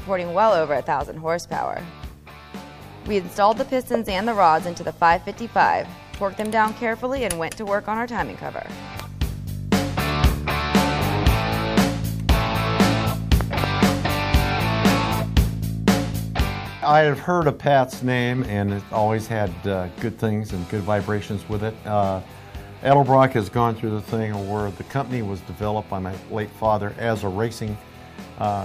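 A loud pop hits at 9.00 to 9.02 s, then a double pop from 13.41 to 13.66 s, each peaking roughly 15 dB above the sound. A voltage pulse, likely from a switch, plug or static discharge, was added. Unlike a dropout, the sound continues uninterrupted underneath.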